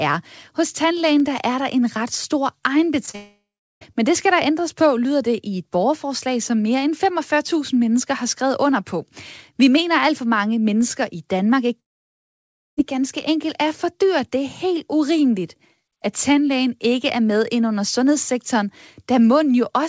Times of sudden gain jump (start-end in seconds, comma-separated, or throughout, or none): none